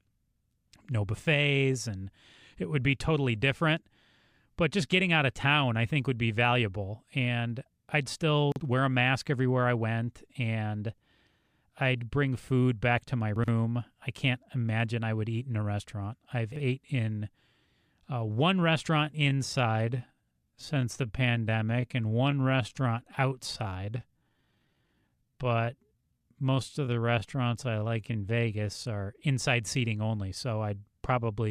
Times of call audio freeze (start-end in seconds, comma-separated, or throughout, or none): none